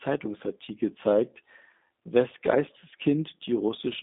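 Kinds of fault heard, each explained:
G.729 codec: The speech has that rough, slightly synthetic quality you get when a low-rate VoIP codec rebuilds it from a vocal tract model, a pitch predictor and a handful of pulses per frame instead of the actual waveform. The damage is plainly audible throughout, which fits an 8 kbit/s G.729A link. The line band sits roughly between 200 Hz and 3.7 kHz, and nothing at all comes through above 3.8 kHz.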